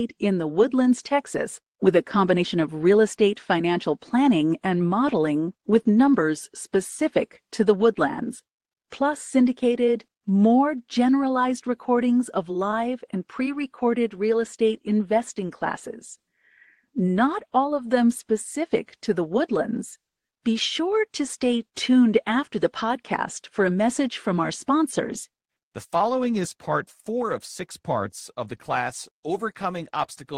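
No technical faults are audible.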